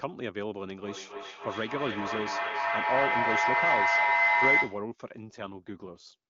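From 0.81 s to 4.93 s a shrill tone near 2 kHz swells over the speech, peaking at about 7 dB above it and building on repeats roughly every third of a second. This is feedback howl: a microphone picking up a nearby loudspeaker on the same call, each trip around the loop adding level until one frequency dominates.

Between 5.27 s and 6.16 s the speech turns rougher and more synthetic, with no gap and no loss of bandwidth. This is an AMR rate drop. The AMR wideband (HD Voice) link, clear at 23.85 kbit/s, falls to 8.85 kbit/s, most likely because a weak radio connection diverts bits to error protection.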